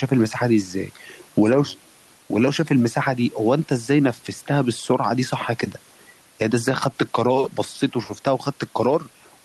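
Speech throughout with gain pumping: the gain swings by roughly 5 dB, pulled down on loud sounds, with room noise about 36 dB below the voice, likely from mic gain set too high driving a fast limiter.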